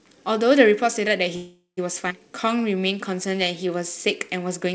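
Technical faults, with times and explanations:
1.36 to 1.79 s, call audio freeze: the sound stalls for about 0.41 s. The last fragment carries on as a fading buzz that drops into roughly 0.14 s of silence, then the audio resumes exactly where it halted. This is likely packets held up in transit, draining the jitter buffer so the receiver had to stretch what it last had. Nothing is lost, but the whole stream now runs about 0.41 s later.
2.09 to 2.12 s, skip ahead: playback jumps forward with only an 11 ms bridge. About 150 ms of audio is gone, and the material on either side is butted almost directly together, giving an abrupt, clipped join. Later audio was already queued, so the dropped stretch was simply bypassed. That skip cancels part of the delay built up by the freeze just before it, pulling the stream back toward real time.
2.29 to 3.69 s, jitter buffer slow-down: across this 1.4 s stretch the audio plays at about 91% speed while the pitch stays unchanged. 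Sounds are drawn out as single pitch periods and slivers of pauses were repeated back to back. The receiver was padding its buffer to rebuild a safety margin, inserting 137 ms in total. The call path's band limit, with nothing above 8 kHz, which fits G.722, is present throughout as well.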